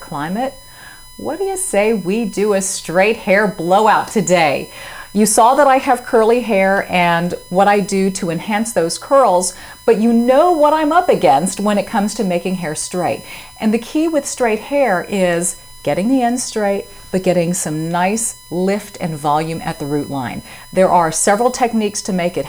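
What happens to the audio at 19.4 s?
At 19.4 s the USB whine is present, as it is through the whole clip. Current pulses from the bus's 1 ms frames leak in through power or ground. This gives a fixed-pitch whine at 1 kHz, strongest at its 10 kHz harmonic, roughly 25 dB below the sound.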